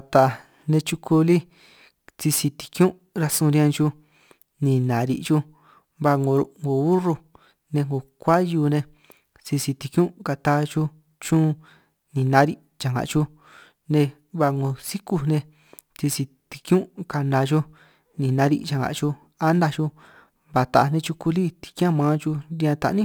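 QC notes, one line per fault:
Throughout, crude rate conversion: a gritty, inharmonic fizz follows the louder and brighter parts of the speech, sitting roughly 25 dB beneath it. The rate was raised by repeating the nearest samples without filtering. The pattern fits a 44.1 kHz to 48 kHz step.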